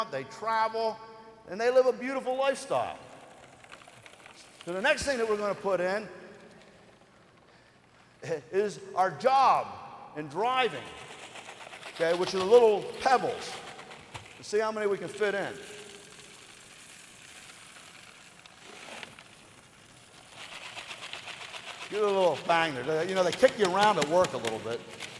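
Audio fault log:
Throughout: resampler restarted on every block. Each 10 ms block was converted from 48 kHz to 24 kHz in isolation, so every edge carries a small error, heard as a 100 Hz buzz that follows the signal and vanishes in silence, unlike steady mains hum.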